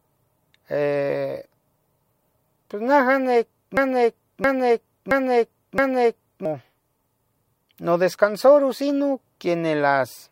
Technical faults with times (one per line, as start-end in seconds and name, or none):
3.77-6.45 broken-record loop